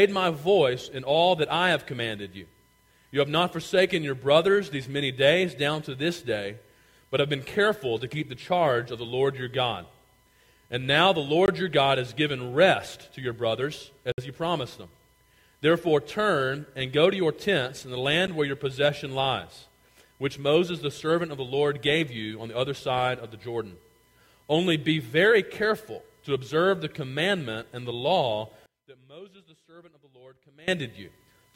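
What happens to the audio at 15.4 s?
Nothing goes wrong at 15.4 s: the audio carries on intact through that moment with no audible fault.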